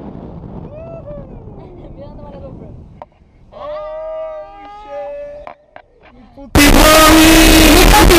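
From 6.55 s to the end, the sound becomes harsh, very loud distortion. Quiet parts blast as loudly as the rest. This is likely signed and unsigned mixed up, fitting 16-bit samples.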